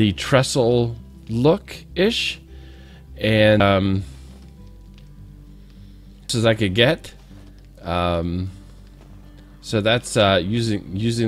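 At 3.60 s the audio jumps forward by roughly 300 ms, and at 6.30 s it leaps again, this time by something like 700 ms. Both are compressed frames skipped: whole blocks of the encoded stream never got decoded, either missing or rejected as damaged, so playback resumes further along. The gaps fit frames of about 93 ms.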